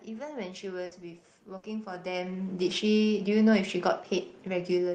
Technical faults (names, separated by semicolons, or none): burst of packet loss